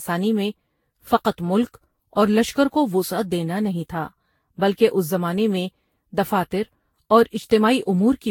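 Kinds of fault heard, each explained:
Generation loss: The speech has a swirly, hollow character with smeared consonant attacks and a diffuse, watery texture that a single moderate-bitrate encode would not produce. This is likely the result of repeated lossy re-encoding, around seven passes with a Vorbis-type codec near 64 kbit/s, each quantising on a shifted frame grid so that noise and spectral gaps accumulate. The band is also cut off above 19.2 kHz.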